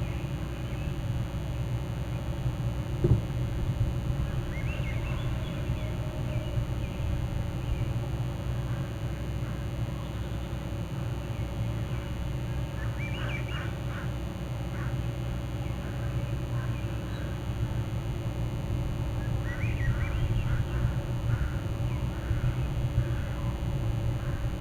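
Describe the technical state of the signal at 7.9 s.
At 7.9 s you're hearing DECT cordless phone buzz, and it runs through the whole clip. A nearby DECT handset or base is firing radio bursts 100 times a second that the audio circuitry rectifies, giving a thin, harmonic-rich 100 Hz buzz sitting roughly 25 dB under the signal.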